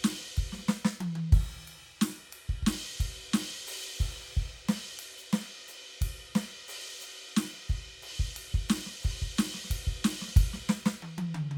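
No faults to report: the music runs without any audible dropout, glitch or distortion at any point.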